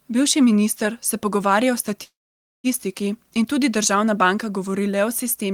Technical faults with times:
2.03-2.67 call audio freeze

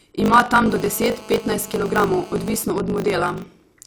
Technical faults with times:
0.00-3.86 block size mismatch (truncated)
0.66-2.63 GSM phone buzz

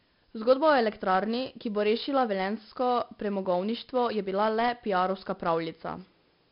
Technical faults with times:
0.00-6.51 4-bit ADPCM compression

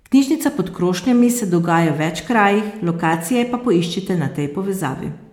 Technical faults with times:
none

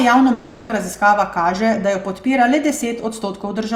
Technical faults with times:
0.33-0.71 long network dropout

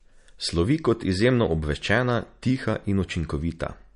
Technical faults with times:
0.00-3.96 MP3 compression

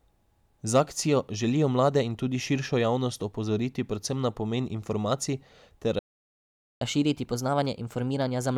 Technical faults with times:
5.99-6.81 playback stall
6.81-8.58 catch-up at higher speed

